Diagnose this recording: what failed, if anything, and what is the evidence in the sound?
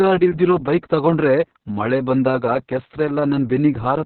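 The codec stage failed: Opus voice compression was running in its SILK mode at a bitrate so starved it points to roughly 6 kbps. Throughout the speech, the band is narrowed to about 4 kHz and the excitation is coarsely coded, leaving the voice muffled, hoarse and faintly robotic.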